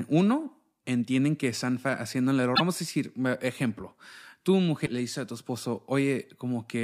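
At 2.55 s the speech jumps ahead, and a brief disturbance lasts to 2.60 s. A shorter one follows at 4.85 to 4.88 s. Both are likely a broken MP3 bit reservoir. Frames went missing, so the next frames reached back for borrowed data and read bytes from the wrong frame. Each disturbance spans only one or two frames of about 26 ms before decoding recovers.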